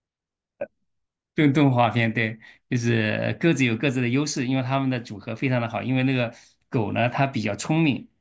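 No technical faults can be heard anywhere in the recording, and the signal holds steady throughout.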